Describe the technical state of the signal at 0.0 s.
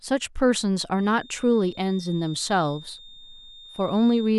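At 0.0 s the speech signal is intact, with no audible fault at that moment.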